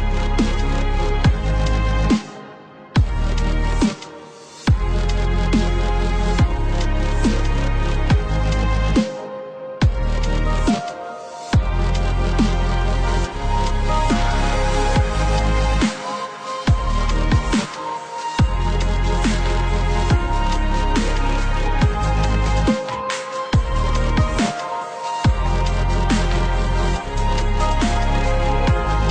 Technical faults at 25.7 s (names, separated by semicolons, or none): none